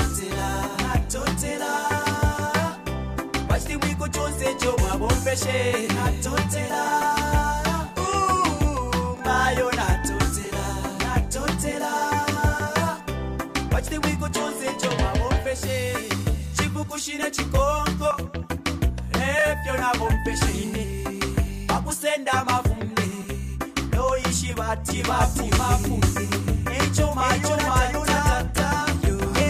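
At 24.90 s a doubled audio track cuts in abruptly and continues to the end of the clip. A second, full-band copy of the sound runs about half a second behind the original at roughly the same level, so every event is heard twice in a flat, clean repeat with no decay or room colouring. The likely cause is the signal being captured a second time through a slower path, or an edit leaving two copies out of step.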